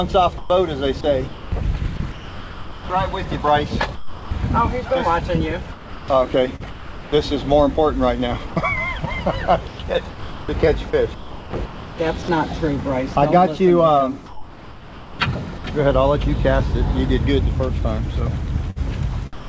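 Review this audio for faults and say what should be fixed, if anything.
Four stretches sound choppy: 0.38–4.31 s (about 1.56 s filled), 5.72–7.12 s (0.82 s), 8.47–15.64 s (2.43 s) and 18.70–19.48 s (0.21 s). This is likely sound chopped by the voice detector, which repeatedly stopped transmission and let comfort noise stand in for quieter passages. Prevent it by disabling discontinuous transmission, or by lowering the detector's threshold and lengthening its hangover time.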